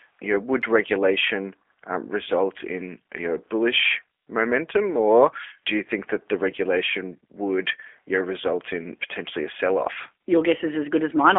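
Throughout, G.729 coding is plainly audible: the 300 Hz to 3.4 kHz band is rebuilt from filter, pitch and pulse parameters, so speech sounds rough and synthetic, consistent with an 8 kbit/s rate.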